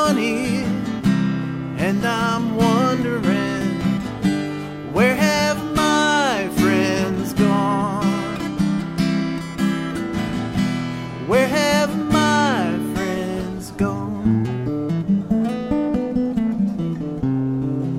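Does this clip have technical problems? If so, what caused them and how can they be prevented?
No, the signal holds steady throughout with no audible technical faults, so there is nothing here to trace to a cause or to prevent.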